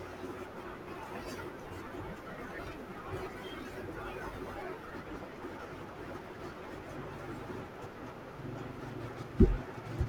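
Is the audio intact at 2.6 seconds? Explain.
No. Compressed frames are skipped at about 2.57 s: roughly 300 ms of speech jumps ahead, not the silent gap of a dropout.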